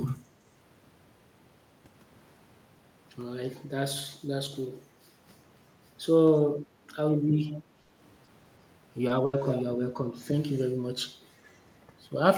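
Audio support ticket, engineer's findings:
Lost packet rebuilt from error correction at 6.99 s, 9.09 to 9.11 s and 9.33 to 9.35 s. 20 ms each. No gap heard. Those frames sound rougher and noisier. Opus in-band FEC path. The next packet carried a low-bitrate copy of the lost one, and the decoder played that. The later two sit inside concealed regions and patch their tail ends.

Echo leak at 7.49 to 7.57 s and 9.47 to 9.63 s. A delayed copy of the voice, 333 ms behind. It is about 25 dB down at first and about 10 dB down the second time. Likely cause is the far end's echo canceller on a loudspeaker setup. It left residual pickup, which got sent back.

Burst of packet loss at 7.81 to 7.91 s and 9.25 to 9.35 s. Each is 80 ms, filled by concealment. The last sound is held and fades: a buzz on voiced speech, a hiss otherwise. Speech resumes later, with 80 ms of the original missing each time. 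This is the jitter buffer and network path, not the codec.

Short concealed packet loss at 8.25 to 8.29 s and 9.07 to 9.11 s. 20 ms each. A brief smear or wobble where the decoder extrapolated the previous sound, then crossfaded back. A short consonant can drop out here. Same network-loss mechanism as the bursts, at a smaller scale.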